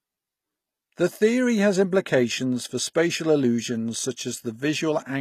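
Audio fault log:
Throughout, HE-AAC compression, likely: the speech has a bright but fake top end, with s sounds coming out gritty and a bit lispy, and the damage is plainly audible. Only the lower band is really coded; the treble is rebuilt by copying lower bands upward under a coarse envelope, so its harmonics don't line up with the real ones. Nothing gets through above about 14.9 kHz, and the overall roughness fits a low bitrate around 24 kbps.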